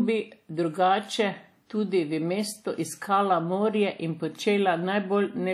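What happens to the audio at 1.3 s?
At 1.3 s the speech carries likely WMA compression damage, present throughout. It sounds washy and ringing, with breathing hiss. Coarse quantisation smears noise over long blocks, consistent with about 48 kbps. Nothing remains above 17.5 kHz.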